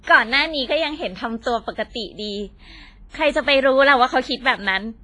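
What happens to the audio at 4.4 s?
WMA compression artefacts are present at 4.4 s, as they are across the whole clip, and are likely the cause of what is heard there. A transform codec at a low bitrate drops weak spectral detail and spreads quantisation noise over long blocks, so the speech rings and sounds washy, with hiss that swells and fades alongside it. Nothing remains above about 10.6 kHz, and the heavy damage fits a very low rate, around 24 kbps.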